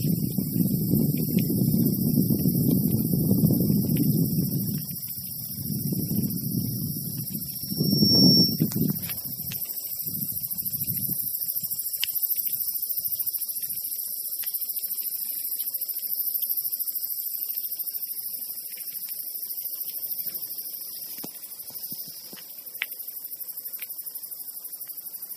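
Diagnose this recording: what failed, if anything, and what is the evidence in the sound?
Loudspeaker feedback squeal in the analogue mic-to-speaker loop: at 7.49–8.73 s a 5.5 kHz tone grows by itself to about 10 dB above the sound, unlike fixed interference.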